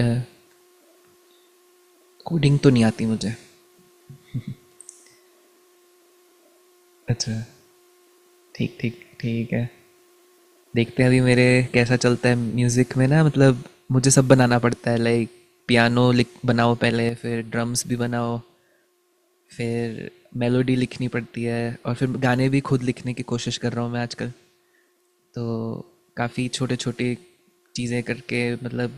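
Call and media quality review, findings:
One channel drops out, 17.09 s to end: speech level steps down abruptly by about 6 dB and holds, no fade like a gain ramp; likely one stereo leg lost before the mono sum.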